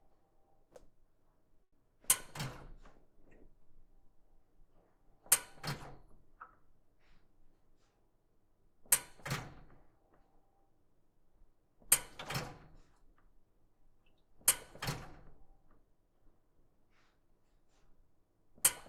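At 1.63 s there is a short stall from a late packet. A packet arrived late and the jitter buffer ran dry. The receiver held the last sound for about 90 ms until it came. Nothing is lost, but the sound lingers with a slight buzz or dip. Playback then runs about 90 ms later.

From 12.75 s to 14.17 s comes a jitter buffer speed-up. Too much audio had built up, so the receiver trimmed tiny pitch-period slices repeatedly. Around 70 ms is cut. The sound plays at 105% speed, slightly hurried, with unchanged pitch.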